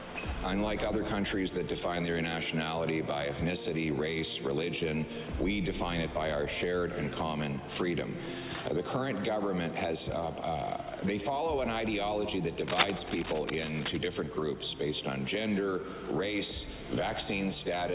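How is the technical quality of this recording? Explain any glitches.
The recording has one clear glitch, set against a band-limited call path whose content stops at 4 kHz, consistent with a 64 kbps G.711 codec.

Cable scratch noise, 12.66 to 13.97 s: dense, ragged crackling about as loud as the sound, likely from a worn connector shifting contact, showing as broadband speckled bursts and jagged waveform spikes.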